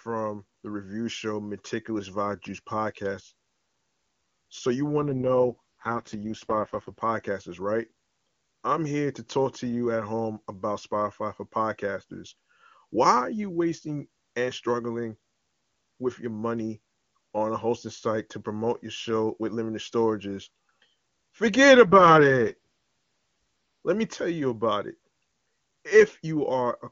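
AMR rate drop, 5.00 to 7.01 s: the codec steps down from what sounds like 23.85 to 6.6 kbit/s, so speech turns raspy and synthetic with no gap.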